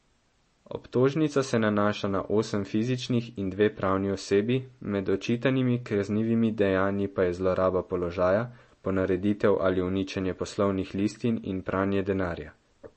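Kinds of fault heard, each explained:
MP3 compression: The encoder was starved of bits, likely MP3 at around 32 kbps, so it discarded everything above 8.4 kHz and thinned out fine frequency detail. Throughout, the speech sounds dull and muffled, with plainly audible coding artefacts.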